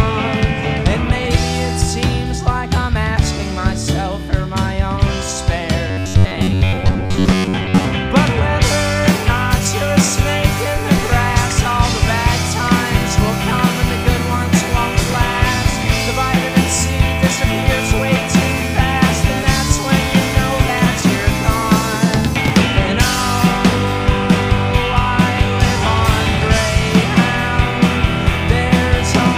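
The audio has two kinds of fault. From 5.88 to 7.85 s it takes on a robotic sound from repeated short buffers: a rigid, metallic buzz at a fixed 93.8 Hz that tracks the underlying sound only roughly, with around 70 percent of that stretch made of repeats. The likely cause is new data arriving too seldom, so the playback path loops the most recent fragment while real audio is skipped. The buzz rate fits a repeated buffer of about 10.7 ms. Unlike a reordering fault, this lasts for about two seconds and imposes a steady pitch of its own. At 15.1 and 22.46 s there are chunks out of order. In each case one 20 ms chunk plays one position late, after the chunk that should follow it. Nothing is lost, but each event leaves three hard joins and is heard as a jumbled moment about 40 ms long. These are brief and isolated and carry no fixed-rate buzz, which separates them from the repeated-buffer fault.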